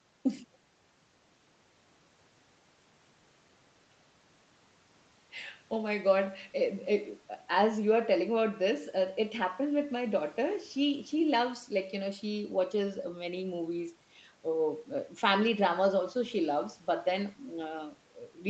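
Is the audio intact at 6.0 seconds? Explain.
Yes, the audio is intact at 6.0 seconds.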